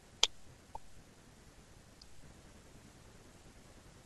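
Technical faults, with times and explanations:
No technical faults are audible in the speech recording; the signal stays continuous and stable in level, timing and tone for its whole length.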